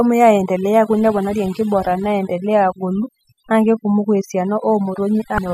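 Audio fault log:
Throughout: overdone noise removal. A noise reduction stage set far too aggressively suppresses individual frequency bands whenever their level sits near its noise estimate, so the background collapses to near silence scattered with twinkling, chirpy specks. Quieter components of the speech fall below that threshold too and are carved away along with the noise.
5.35 to 5.38 s: damaged data in a compressed stream. For about 30 ms near the very end, corrupted bytes in the encoded stream cause the decoder to misread the affected frame, lose sync and hunt for the next valid frame header. The result is a brief synthetic blip or squawk.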